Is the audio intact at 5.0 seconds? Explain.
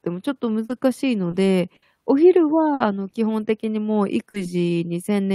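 Yes, the speech at 5.0 seconds is intact, with no dropout, click, distortion or other fault at that moment.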